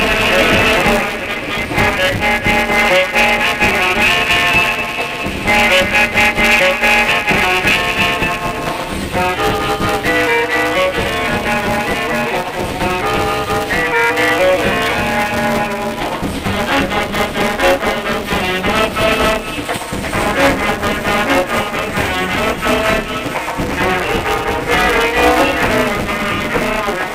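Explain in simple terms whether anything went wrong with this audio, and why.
Something did go wrong: the sound has buffer tearing from start to finish. The program filling the audio buffer and the hardware playing it out have slipped, so in each small chunk about half the sound is stale, roughly 10 ms old, with hard joins either side. That gives a steady robotic buzz at 188 Hz, which fits a 256-sample buffer. Unlike mains hum, the buzz disappears whenever the sound itself goes quiet.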